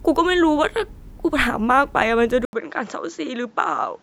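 At 2.45 s the speech cuts out for about 80 ms, then returns duller and about 5 dB quieter, with nothing above 7.4 kHz and a new noise floor roughly 45 dB down. That's likely the input switched to a poorer device, which holds to the end.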